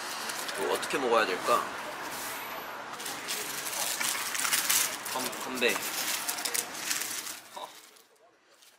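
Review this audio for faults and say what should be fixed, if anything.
At 7.29 to 7.33 s, compressed frames are skipped: the audio jumps ahead roughly 70 ms, about three 20 ms frames, rather than leaving a silent gap. Prevent it by checking file integrity and retransmitting or concealing damaged frames before decoding.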